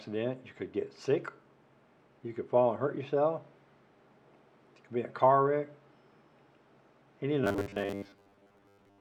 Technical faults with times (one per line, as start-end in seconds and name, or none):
7.44-9.00 robotic sound from repeated short buffers